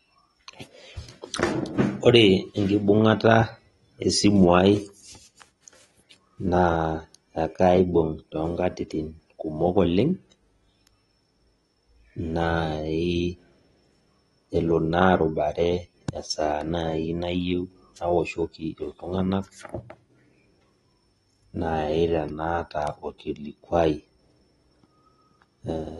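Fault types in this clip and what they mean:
AAC compression: The speech has a dull, smeared quality with plainly audible coding damage throughout, and nothing is present above 11.8 kHz. The likely cause is AAC-LC at a low rate, which fits a bitrate of about 32 kbps. The encoder quantises frequency lines coarsely against a hearing model and drops the top band. On a spectrogram, energy stops at a hard ceiling near 11.8 kHz, with patchy holes and blotchy texture in the upper bands, especially on sibilants.
Pre-echo: Between 23.18 and 23.2 s, a sharp attack in the speech is preceded by a short hiss spread over about 20 ms. The codec sizes its quantisation noise for the loud onset and spreads that noise evenly across the whole transform block, so it also covers the quiet moment just before the attack. The onset sounds soft or smeared. On a waveform, low-level noise rises ahead of the transient. 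On a spectrogram, a broadband smear leads into the attack.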